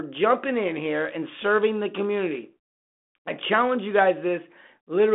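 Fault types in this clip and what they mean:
No faults found; the speech arrives over a 32 kbit/s telephone codec path limited to about 200 Hz to 3.5 kHz, with nothing above 3.8 kHz.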